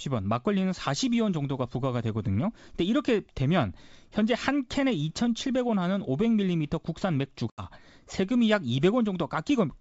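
At about 7.50 s there's packet loss on an ADPCM call: a hard-edged gap of roughly 80 ms, several packets' worth, filled with silence. When the speech comes back around 7.63 s, the decoder's predictor and step size are out of step, so there's a brief, slightly distorted stretch before it settles.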